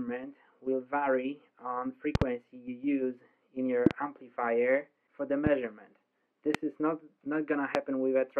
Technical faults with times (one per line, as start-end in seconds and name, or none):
2.15-2.24 loud pop
3.86-3.93 loud pop
5.47-5.49 loud pop
6.54-6.57 loud pop
7.75-7.77 loud pop